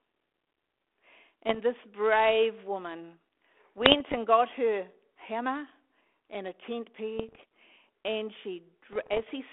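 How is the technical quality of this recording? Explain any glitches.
The recording is telephone-band speech with four bursts of damage, over a line whose 250 Hz to 3.5 kHz band and light ADPCM texture fit G.726 at 32 kbit/s.

Bit errors on an ADPCM link occur at 1.47 to 1.6 s, 3.78 to 4.2 s, 7.19 to 7.43 s and 8.93 to 9.31 s, with well under one percent of bits flipped. Each wrong bit throws off the decoder's adaptive step size and prediction, so the error rings on for several milliseconds instead of staying a single click. The result is pops and rough, gritty bursts with brief jumps in level.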